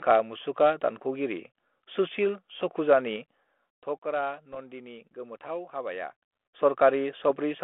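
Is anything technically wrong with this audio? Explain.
Yes, there are two kinds of fault in this speech.

From 4.53 to 4.60 s, and again at 7.30 s, there are pops and a short rough burst with a brief change in level. These are bit errors on an ADPCM link. Flipped bits throw off the decoder's step size and predictor, so each hit rings on for a few milliseconds. The first burst is longer, which points to several frames being hit. The second is a single isolated pop.

Between 6.10 and 6.66 s, a ticking, zipping texture rides on the voice as its level changes by around 10 dB. This is zipper noise. The gain is moved in unsmoothed 3 dB steps, roughly seven per second, and each step makes a small click. The steps are heard over the narrow telephone-band sound that the 32 kbit/s G.726 link passes, roughly 250 Hz to 3.4 kHz.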